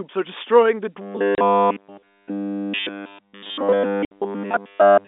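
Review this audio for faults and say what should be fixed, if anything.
From 1.02 s to the end of the clip, the speech turns into a rigid, metallic buzz pitched at 100 Hz that only loosely tracks the words. This is robotic sound from repeated short buffers. Almost none of the real audio gets through; instead a fragment about 10 ms long is looped, and that loop length sets the fixed 100 Hz tone. The likely cause is audio arriving too slowly for playback, so the software keeps replaying its last buffer. Preventing it means giving the playback path enough buffering and processing headroom that it never runs dry.

Two sharp-edged gaps cut through the sound, one from 1.35 to 1.38 s (30 ms) and one from 4.05 to 4.11 s (60 ms). This is packet loss filled with silence. The receiver had nothing to play for those stretches and inserted silence. The second gap is exactly double the first, which fits a 30 ms packet, with one packet missing and then two. 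Enabling packet loss concealment and a jitter buffer, plus improving the network link, would prevent it.

The G.711 telephone coding itself restricts the band to about 250 Hz to 3.6 kHz.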